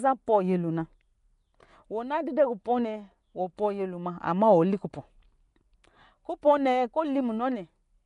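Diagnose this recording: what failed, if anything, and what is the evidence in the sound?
The speech has a rough, hissy halo and smeared, underwater quality throughout, with nothing above 10.6 kHz. This points to codec-stage damage, likely Nellymoser compression, with noise-filled empty bands, consistent with roughly 44 kbps.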